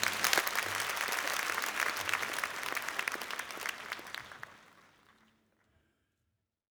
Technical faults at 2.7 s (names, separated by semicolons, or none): one channel drops out